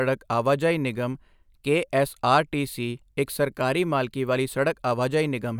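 No technical faults can be heard anywhere in this speech recording.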